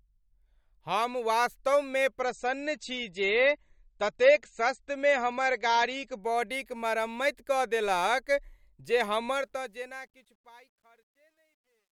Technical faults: adaptive stream at a lower bitrate; truncation distortion on a fade

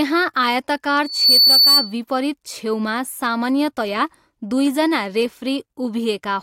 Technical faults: loudspeaker feedback squeal

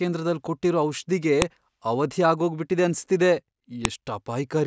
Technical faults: file header played as audio

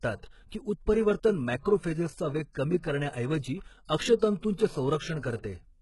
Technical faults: HE-AAC compression; pre-echo

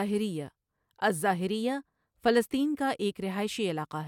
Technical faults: none

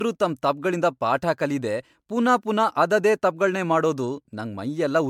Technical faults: generation loss

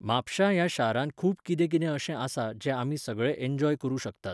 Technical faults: none

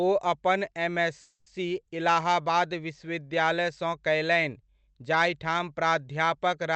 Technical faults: call audio freeze

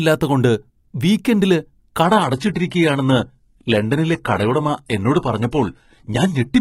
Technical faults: adaptive stream at a lower bitrate

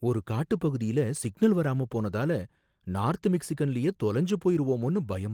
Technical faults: none

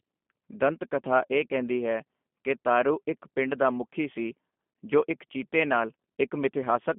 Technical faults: G.729 codec

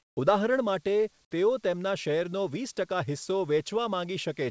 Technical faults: comfort noise in place of the background

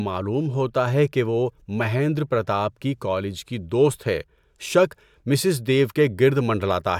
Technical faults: none

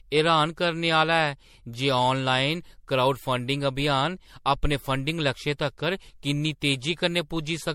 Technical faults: generation loss

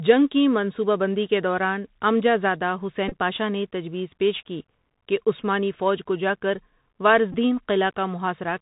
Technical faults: Bluetooth CVSD headset codec; Bluetooth headset packet repeated

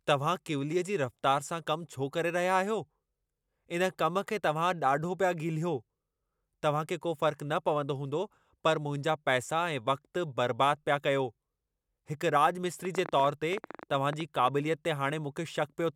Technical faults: train of clicks

